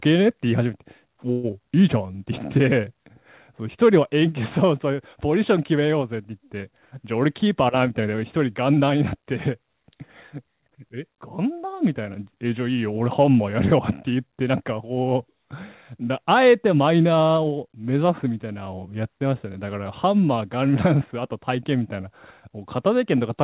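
Speech, carried over a call link whose G.711 mu-law coding leaves nothing above 4 kHz, which fits a 64 kbps stream. At 1.32 s the sound stops moving forward. The last sound is held on as a fading buzz for about 114 ms, until 1.46 s, and never drops to silence. This is a call audio freeze. Packets were likely held up in transit, and the jitter buffer ran dry. The receiver stretched the last sound to cover the wait. The speech then picks up where it stopped, so nothing is lost. A gap has simply been inserted. Soon after, from 1.51 to 1.55 s, comes a short concealed packet loss. About 40 ms of audio never arrived in time. The receiver patched the hole by extending the preceding sound, and this passes as a brief smear or wobble before blending back into real speech. That missing stretch also shortens the built-up delay by roughly 30 ms. From 1.75 to 2.13 s there is a jitter buffer slow-down. 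The speech plays at about 91% speed, with the pitch unchanged. Sounds are drawn out, and a slight warble may be heard. The receiver repeated single pitch periods and pause fragments to rebuild its reserve, adding 43 ms in total.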